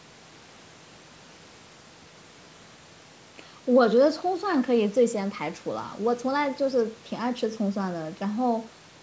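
No faults: the speech passes through call microphone processing as expected, with the lowest bass trimmed by its high-pass filter and nothing present above 8 kHz.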